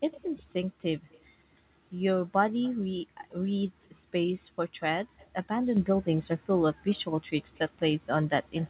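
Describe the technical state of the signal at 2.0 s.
At 2.0 s the speech is intact, with no fault present; only the ordinary narrow band of a G.711 call path is heard, with nothing above 4 kHz.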